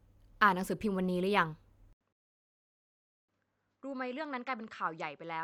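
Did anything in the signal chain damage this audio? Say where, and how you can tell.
Yes. At the driver and device stage, the input likely switched to a poorer device at 1.93 s. An 80 ms silence is followed by sound that stops at 7.9 kHz, about 10 dB quieter, over a faint new noise floor. Unlike a codec change, the altered tone and noise continue to the end.

A rebuffering stall at playback runs from 2.13 to 3.29 s. The player ran dry, went silent for 1.16 s, then resumed exactly where it stopped. Unlike a packet-loss dropout, nothing is skipped, and no audio is missing on either side of the gap.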